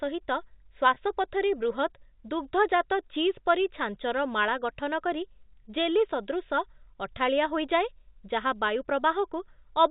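At 0.94 to 0.96 s there is a packet loss with pitch repetition: a roughly 20 ms gap, which fits a single lost packet, was bridged by repeating the last pitch period. Because the loss is so short it sounds like a slightly held, buzzy note. On a waveform the same cycle repeats across the gap, fading in level. A spectrogram shows the harmonics frozen flat for that instant, all below the 4 kHz ceiling set by the G.711 telephone coding.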